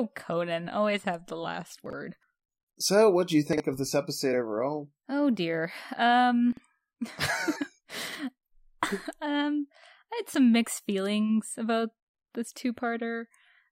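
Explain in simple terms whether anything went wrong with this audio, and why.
Four times in this speech clip, at 1.86–1.93 s (just after "always have the last"), 3.53–3.60 s (between "what do you" and "of this"), 6.53–6.60 s and 8.08–8.15 s, there is a short jumbled flicker. These are chunks out of order. A tiny slice of sound, about 23 ms long, turns up two slices late and plays after the ones meant to follow it. Nothing goes missing, but the shuffle leaves sharp joins.

At 7.55 s there is a different fault, compressed frames skipped. About a twentieth of a second of audio is simply dropped, because those pieces of the compressed file were missing or too damaged to play. The sound jumps forward. That sets it apart from the other four moments: here something is lost, while there everything is present but in the wrong order.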